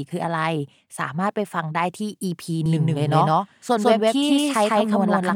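A doubled audio track runs from 2.66 s to the end of this speech clip: a second, full-band copy of the same speech enters abruptly and trails the original by roughly 150 ms, at about equal loudness. It carries no decay or room colouring, so it sounds like a hard slapback rather than an echo. The likely cause is the signal being captured twice, once through a slower path, or an edit leaving two copies out of step.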